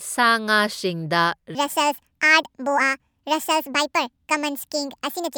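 From 1.55 s to the end, a section at the wrong speed runs 1.62 times fast, likely a clock mismatch. The speech jumps about seven semitones higher and hurried, and spectrogram harmonics step abruptly upward.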